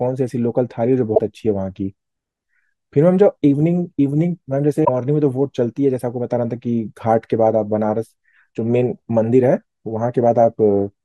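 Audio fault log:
1.12–1.20 s and 4.81–4.89 s: damaged data in a compressed stream. Each time, about 80 ms of corrupted encoded data throws the decoder off its frames, so it misreads them and produces a brief glitch in the speech, a chirp, squawk, click or short hole, before locking onto a clean frame header.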